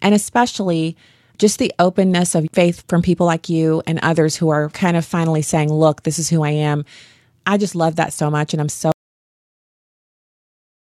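At 8.92 s the speech cuts off mid-flow into an audio dropout to silence that lasts to the end, about 2 s of silence with no room tone. The waveform flatlines and the spectrogram goes blank, most likely because the input was lost while recording continued.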